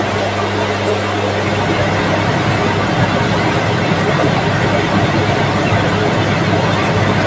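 A ground loop or a nearby transformer has let the 50 Hz power line leak into the signal path, producing mains hum that runs from start to finish. It sits as a steady, low drone at 50 Hz with a few low harmonics stacked above it. At roughly 5 dB below the wanted sound, it is almost as loud as the material itself. It stays clear beneath a band that stops at 8 kHz after call microphone processing.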